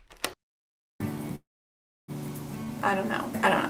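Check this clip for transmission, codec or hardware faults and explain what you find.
One transmission fault is present. From 1.35 to 2.10 s there is a call audio freeze: the last sound smears briefly, then about 0.65 s of silence, and playback resumes intact. It was likely caused by delayed packets draining the jitter buffer. That adds about 0.73 s of delay, with nothing lost. On a spectrogram, a short smeared band gives way to a blank gap.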